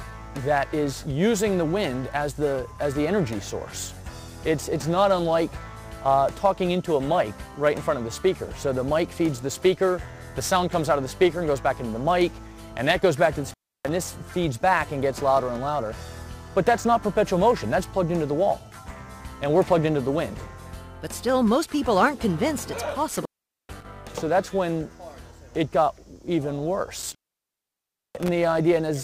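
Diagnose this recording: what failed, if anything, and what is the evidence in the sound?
Intermittent contact in the analogue wiring, probably a loose cable or plug. The audio drops out at 13.50–13.89, 23.09–23.86 and 27.02–28.28 s, with crackle at each edge and faint hiss while the line is open for roughly 0.3, 0.4 and 1 s.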